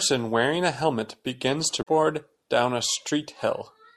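At 1.79 s, right after "wearing a helmet begins", damaged data in the compressed stream causes about 90 ms of disruption as the decoder misreads corrupt frames and resyncs to the next header. The waveform shows an abrupt discontinuity.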